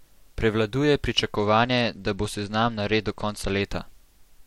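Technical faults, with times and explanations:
1.36 to 3.62 s, Bluetooth SBC bit pool drop: a congested link forced the encoder down to a far smaller bit pool, which fits a rate near 90 kbps. The upper sub-bands lose their bits and the rest are coarsely quantised, so the speech dulls and turns gritty until recovery.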